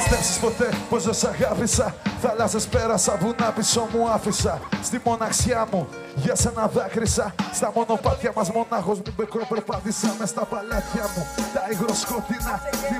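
Channel delay (comb filtering) from 8.92 s to the end: one channel lags by about 5 ms before the mono sum, cutting evenly spaced notches from around 100 Hz, so the sound turns hollow.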